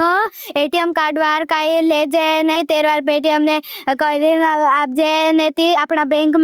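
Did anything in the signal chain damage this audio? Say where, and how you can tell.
Yes. The call processing pumps throughout. The level ducks by roughly 10 dB under each loud passage, leaving the speech squashed and flat in level. The likely cause is input gain set far too high, with a fast limiter or compressor clamping down on every peak.

At 2.55 s there's a skip ahead, which points to the network or jitter buffer. About a third of a second of speech just isn't there, and the two sides butt together with no gap or fill. Audio was discarded while later packets were already queued.

From 4.46 to 5.86 s there's a jitter buffer speed-up. The speech runs at about 109% with the pitch unchanged, so it sounds hurried. The buffer had backed up and trimmed out short pitch-period chunks repeatedly, removing around 150 ms to cut the delay.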